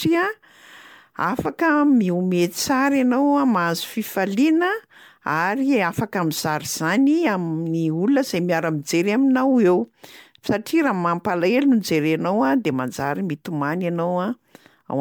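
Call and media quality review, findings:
Generation loss, whole clip: swirly, hollow speech with blurred attacks despite content up to 20.1 kHz, unlike one low-bitrate encode; likely about seven MP3 passes, fitting 128 kbit/s.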